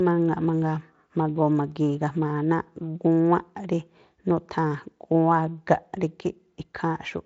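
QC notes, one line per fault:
No audible faults.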